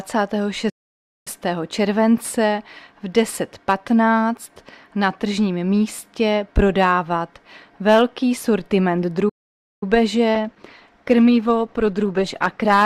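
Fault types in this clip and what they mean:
Playback stall: the output goes dead mid-flow for about 0.56 s at 0.69 s and about 0.53 s at 9.29 s, then picks up again, most likely because the player ran dry of buffered data or its thread got held up.
Call bitrate drop: from 10.36 s to the end the encoder is squeezed from 64 kbps down to 12 kbps, so the sound gets coarse and watery and loses its top end as Opus throws away detail and high frequencies.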